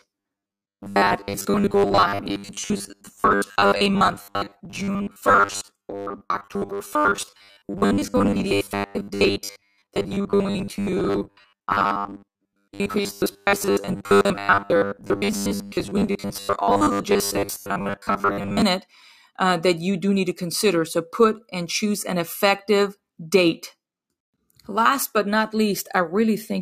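From 0.01 to 18.62 s the speech has robotic sound from repeated short buffers, a rigid metallic buzz at 100 Hz that still roughly follows the speech. The likely cause is audio arriving too seldom, so about 10 ms segments are repeated, replacing much of the signal.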